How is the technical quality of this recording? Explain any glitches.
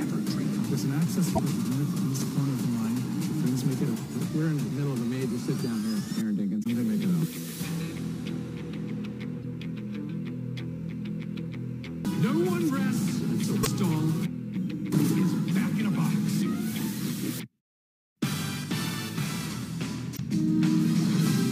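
The recording is marred by five brief bursts of damaged data in the compressed stream, at 1.32, 6.60, 9.42, 13.60 and 20.13 s. Each is a short glitch cutting across the sound, lasting about 70 ms, except the one at 9.42 s, which is shorter at about 30 ms. They happen because bytes in the encoded file were lost or overwritten. The decoder misreads the affected frames, briefly outputs garbage, loses sync, and then locks onto the next valid frame header to recover.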